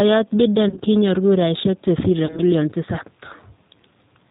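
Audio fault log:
Throughout: G.729 codec. The speech is squeezed into about 8 kbit/s, with nothing above 4 kHz. The decoder rebuilds each frame from a vocal tract filter plus a handful of pulses, so the voice comes across dull, a bit rough and plainly synthetic, which fits G.729A.
0.69–0.80 s: VoIP packet loss concealed by the speech codec. About 50 ms went missing, spread over roughly 80 ms in short runs of at most 20 ms. The decoder filled each gap by stretching the last pitch and filter into a fading buzzy tone or coloured noise.
2.26–2.40 s: VoIP packet loss concealed by the speech codec. About 30 ms was lost here, and again it gets patched with a stretched, decaying buzzy tone or coloured noise. Because each frame builds on the last, the voice stays weak or distorted for a moment after real packets resume.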